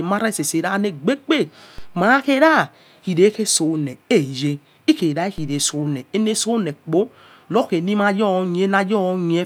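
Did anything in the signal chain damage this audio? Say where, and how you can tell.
Yes. Two DC steps, at 1.78 s (just before "mai khora") and at 5.38 s, each a low thump. The converter or analogue input shifts its zero line by about −24 dBFS, which then drains away through a roughly 2 Hz high-pass while the speech itself continues unaffected.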